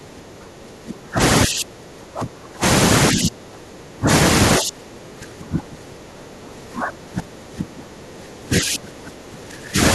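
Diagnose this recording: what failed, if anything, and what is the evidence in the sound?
Call processing failed: speech suppressed in double talk. The speech dips deeply at 0.0 to 1.2 s, 1.46 to 2.64 s, 3.12 to 4.08 s and 4.59 to 9.79 s. The drops reach about 25 to 30 dB. The likely cause is an echo canceller mistaking near-end talk overlapping the far end for echo.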